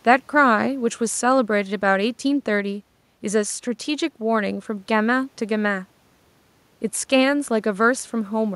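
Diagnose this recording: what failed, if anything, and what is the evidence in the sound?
Nothing stood out on listening to this speech recording, apart from faint room noise sitting about 41 dB below the speech, which belongs to the recording space rather than to any stage of the system.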